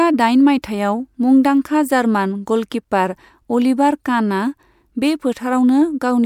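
Pre-echo sits just before three speech attacks, at 0.62, 1.43 and 2.70 s: hiss lasting 14, 11 and 15 ms, about 17, 12 and 18 dB up. Long blocks of around 26 ms spread each attack's noise backwards. Unlike reverb, the smear precedes the onset.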